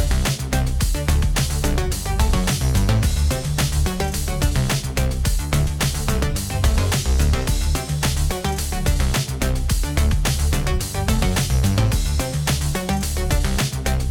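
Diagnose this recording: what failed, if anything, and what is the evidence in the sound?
Nothing failed; no fault is audible anywhere.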